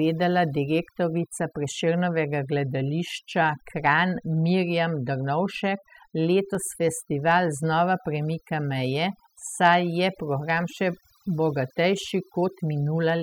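Overdone noise removal, throughout: an over-strong noise reducer mutes bands near its noise estimate, leaving near-silent gaps with twinkling specks.

Dropped samples, at 6.55 s: a single sharp click, likely from well under a millisecond of missing audio making the waveform jump abruptly to a later value.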